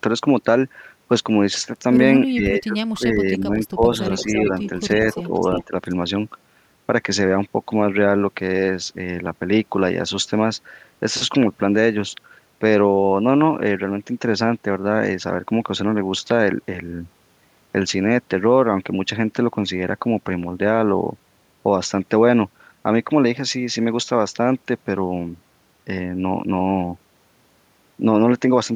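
From 2.30 to 3.84 s, an echo canceller likely mistook the talker for loudspeaker echo while both sides spoke and turned both down. This speech suppressed in double talk makes the voice dip by up to about 20 dB, for roughly a second in total. At 4.18–4.67 s and 5.13–5.64 s comes echo leak, likely from a loudspeaker-side canceller letting its microphone pickup through. A copy of the voice returns 336 ms late, about 15 dB below the speech. At 5.65–5.73 s, a brief suppression, likely the same double-talk clamping, dips the speech about 10 dB. A faint echo at 5.85–5.95 s, likely leaked the same way, sits about 35 dB down.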